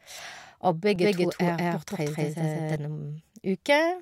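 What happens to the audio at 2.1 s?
At 2.1 s the speech is caught in a doubled audio track running from 0.96 to 2.76 s. A second full-band copy trails the original by around a fifth of a second at roughly equal loudness, likely from a slower parallel capture path, with no room decay, and it starts and stops abruptly.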